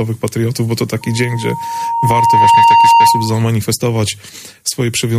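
Loudspeaker feedback squeal runs from 1.01 to 3.51 s: a microphone is hearing the loudspeaker it drives, and the loop gain passes one at 928 Hz. That tone swells over roughly a second and a half until it sits about 10 dB above the sound.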